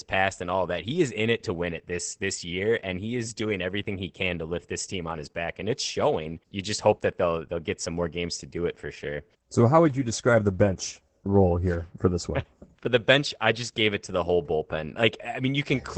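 From start to finish the speech carries Opus voice compression: the SILK coder keeps only a wideband range, so nothing survives above 8 kHz, and its coarse excitation makes voices muffled and hoarse, which fits a rate near 12 kbps. A spectrogram shows a flat ceiling at 8 kHz and smeared harmonics.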